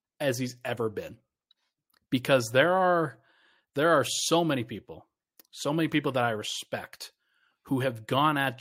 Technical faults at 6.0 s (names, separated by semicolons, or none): none